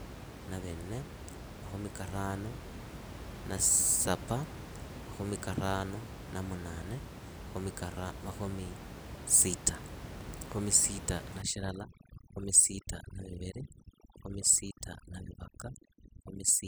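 From 11.42 s to the end, overdone noise removal cuts bands near the noise estimate, leaving the room noise, about 12 dB below speech, twinkling.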